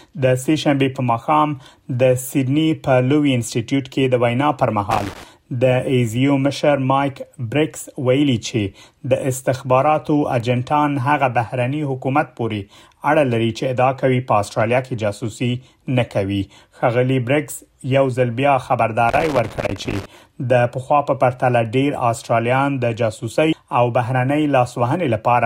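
From 4.91 to 5.24 s and again from 19.09 to 20.06 s, loose connector crackle: a worn contact chopping the signal, heard as irregular scratchy bursts, not a single clean click. At 23.52 s, compressed frames were skipped, jumping ahead around a fifth of a second, which fits about ten 24 ms frames.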